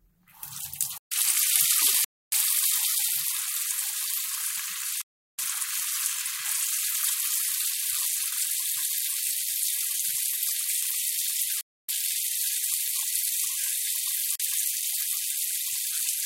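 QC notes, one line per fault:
0.98 to 1.12 s, block of digital silence: about 137 ms of samples replaced by zeros, so the sound drops out abruptly.
2.04 to 2.32 s, block of digital silence: about 279 ms of samples zeroed with no fade, heard as a short hole.
5.02 to 5.39 s, block of digital silence: the longest dropout, about 372 ms of zeros, which fits a 16384-sample block; the sound cuts out sharply and snaps back.
11.61 to 11.89 s, block of digital silence: about 279 ms of samples replaced by zeros, producing an abrupt hole.
14.36 to 14.40 s, block of digital silence: only about 42 ms of zeroed samples, so it is heard as a short hole.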